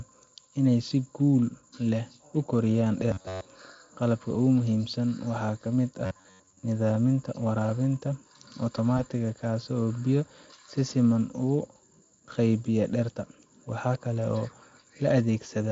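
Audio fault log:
3.11–3.45 s and 6.06–6.63 s, robotic sound from repeated short buffers: the speech turns into a rigid, metallic buzz pitched near 94 Hz. It is likely caused by late audio being covered by replaying a roughly 10.7 ms chunk, so about two thirds of the real signal is skipped.
8.97–9.04 s, VoIP packet loss concealed by the speech codec: a brief fading smear replaces the speech, with the voice weak or distorted afterwards. This points to a single lost 20 ms packet that the Speex decoder filled by extrapolating its last pitch and filter at falling gain.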